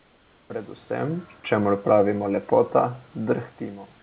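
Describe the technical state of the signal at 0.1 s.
Comfort noise in place of the background, 0.0 to 0.5 s: transmission likely paused, so steady, featureless synthetic noise about 4 dB quieter replaces the real background.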